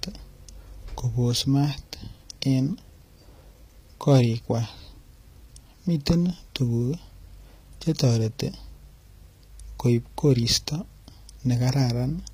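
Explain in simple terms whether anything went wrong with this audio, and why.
The whole clip has plainly audible codec damage, most likely from HE-AAC compression. Nothing sits above about 15.5 kHz, and the top end is rebuilt from copies of lower bands rather than the real thing, so s sounds come out gritty, metallic or lispy.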